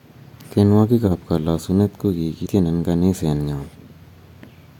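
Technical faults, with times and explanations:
1.07–1.12 s: corrupt frame decoded. A few damaged compressed frames were played anyway, and misread gains and codes put energy at the wrong frequencies as a brief squeaky burst peaking loudly, around -10 dBFS.
2.42–2.47 s: compressed frames skipped. Roughly a tenth of a second of speech is missing, so the audio jumps ahead by whole frames.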